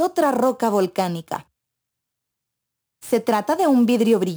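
From start to finish there's sample clock jitter riding on the sound. The converter's clock is wobbling, something like ten microseconds, so each sample gets grabbed a touch early or late. Wherever the waveform moves fast, that timing slop turns into amplitude error, sitting roughly 25 dB under the signal. You hear it as a grainy hiss glued to the loud, bright moments, and it drops away completely whenever things go quiet.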